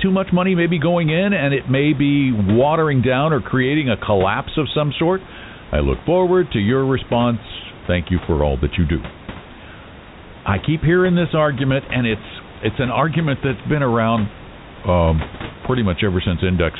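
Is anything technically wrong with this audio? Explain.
No, nothing in this speech clip points to a technical fault. The sound stops at about 4 kHz, which fits a narrowband telephone codec such as G.711 A-law on a call path, and a room background sits roughly 18 dB below the speech.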